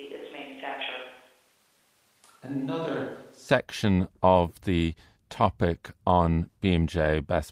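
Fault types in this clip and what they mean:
Switch to a distant microphone: From the start to 3.49 s the voice sounds roomy, hollow and thin, about 5 dB quieter, with more background noise. The likely cause is a far microphone. The close sound returns abruptly.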